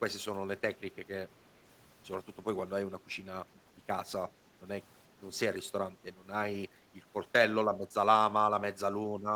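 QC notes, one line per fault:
3.53–3.6 s, echo leak: a faint, short scrap of the speech returns 347 ms late, far below the main level, likely a far-end loudspeaker's echo canceller letting a fragment through; the spectrogram shows a weak delayed ghost of earlier harmonics, barely visible in the waveform.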